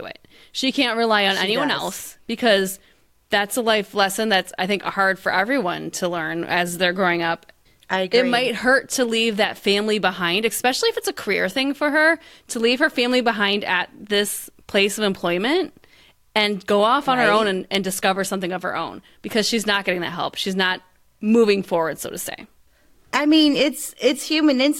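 No audible technical faults occur anywhere in this recording.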